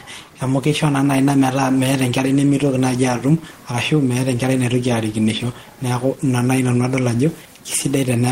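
Nothing stood out on listening to this speech, with only a low room noise sitting about 33 dB beneath the voice as part of the recording itself.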